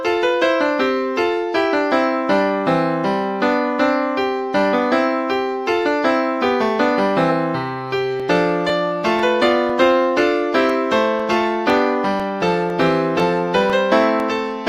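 The audio has periodic USB or driver dropouts from 8.20 s to 14.20 s. About fifteen short gaps fall every 0.5 s. Each drops a couple of milliseconds of sound and leaves silence. They sound like regular ticks. A background task stalling the audio path causes this.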